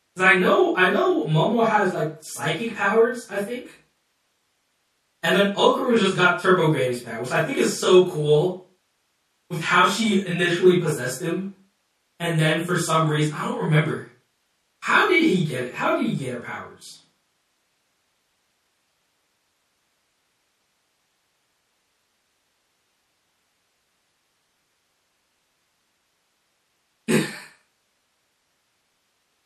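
Throughout the speech, the high end sounds dull and cut off, sibilants turn chirpy and metallic, and the background has a watery swirl, all plainly audible. This is likely MP3 compression, consistent with about 64 kbps, where the encoder drops treble and lets weak frequency lines flicker between frames.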